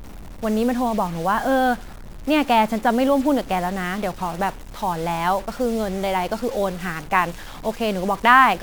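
Throughout the speech, a stuck bit is present, likely from a faulty converter or data line: about half the samples are offset by a step of about -35 dBFS that follows the waveform. It sounds like harsh, buzzy distortion, and pauses fill with noise.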